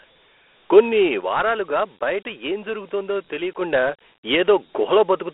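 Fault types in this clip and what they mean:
Dialogic VOX ADPCM: the speech carries the gritty, hissy texture of 4-bit OKI ADPCM at about 32 kbps, heard plainly throughout, with the band held to a phone line of roughly 300 Hz to 3.4 kHz and nothing above 3.8 kHz.
One channel drops out: from 1.21 to 3.61 s the level falls abruptly by about 6 dB and recovers at the end, the likely result of one stereo channel going silent before the two were summed to mono, halving the shared signal.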